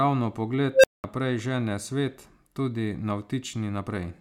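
At 0.73 s an unstable filter kicks in: a recursive stage with bad coefficients runs away, so a tone around 500 Hz swells to a loud squeal in about 106 ms, clips, then the sound drops out for roughly 200 ms until 1.04 s, just before "žene svet tudi".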